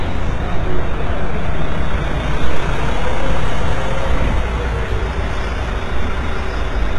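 From start to finish the treble sounds gritty and metallic, with nothing above 11.7 kHz, likely HE-AAC compression at a low bitrate rebuilding upper bands from copied lower ones.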